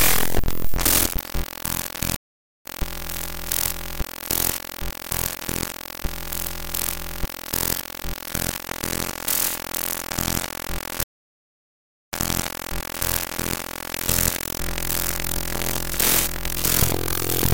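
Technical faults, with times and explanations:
2.16–2.66 s, stream reconnect: the connection drops for about 0.49 s, then a fresh decoder picks up roughly 0.3 s further into the stream, so some sound is skipped.
11.04–13.06 s, stream reconnect: after about 1.07 s of silence, playback resumes 0.95 s earlier as the server resends a burst, so that stretch of sound repeats.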